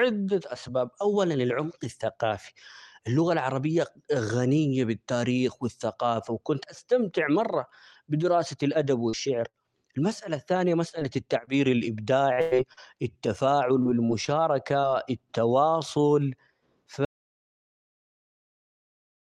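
At 9.09 to 9.15 s and again at 9.49 to 9.55 s the speech smears for an instant, a short wobble where the sound seems to hang on itself rather than move on. Both are short concealed packet losses: roughly 40 ms of the call reached the decoder too late each time, and the receiver bridged the hole by extending the preceding sound, then crossfaded back into the real signal, each event lasting about 55 to 65 ms in all.

From 10.89 to 14.85 s the voice turns choppy, with small pieces dropping out in a stuttering rhythm. This is repeated packet loss producing robotic sound. Ten separate holes fall within that stretch, the longest about 100 ms and together about a third of a second, so around 8% of the span is synthetic fill. Each patch continues the last sound before real audio resumes, and the next loss arrives soon after.

At 17.05 s the audio cuts out abruptly and stays silent through to the end, with no room tone at all. 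This is an audio dropout to silence, the signal replaced by silence rather than faded or muted gradually. It was likely caused by the input being lost, through a disconnected device, a failed link or an accidental mute, while the recording carried on. Throughout, the Opus call path limits the top end to around 12 kHz.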